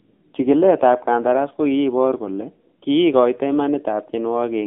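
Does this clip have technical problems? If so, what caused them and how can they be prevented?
Yes. Throughout, the speech shows AMR narrowband mobile codec damage: the band stops at 250 Hz and 3.6 kHz, and the voice turns buzzy and synthetic, which fits a low 7.4 kbps mode. A plain telephone filter would narrow the sound without that modelled buzz. Prevent it by using a wideband codec or a higher bitrate.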